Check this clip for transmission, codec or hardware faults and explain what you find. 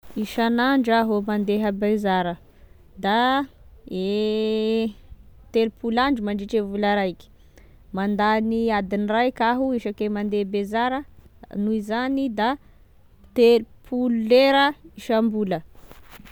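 No faults turn up anywhere in the clip.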